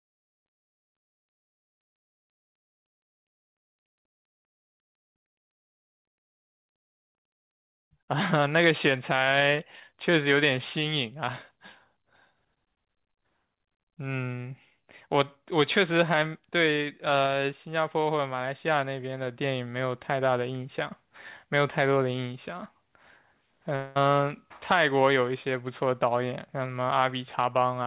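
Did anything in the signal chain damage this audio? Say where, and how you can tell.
Yes: a long network dropout at 23.76–23.97 s. About 200 ms of speech goes missing, bridged by a fading concealment buzz, likely from lost packets.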